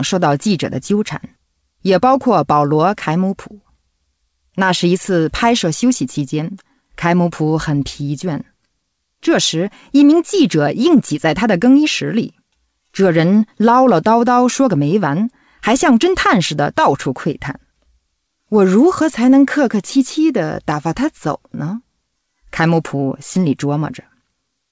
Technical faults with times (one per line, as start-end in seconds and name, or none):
none